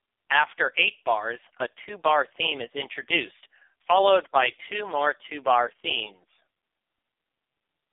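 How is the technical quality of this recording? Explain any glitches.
Pretty rough, honestly. The whole recording has been through an AMR narrowband mobile codec, and the damage is heavy. Nothing gets past 3.6 kHz, and the lows are thin below 300 Hz. The speech comes out buzzy and synthetic because a coarse vocal-tract model is rebuilding it from very few pulses, which points to AMR-NB's lowest mode, around 4.75 kbps.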